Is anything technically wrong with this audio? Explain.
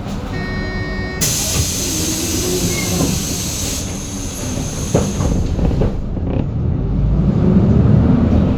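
No, there's nothing technically wrong with this audio; no dropouts, distortion or other faults are audible anywhere in it.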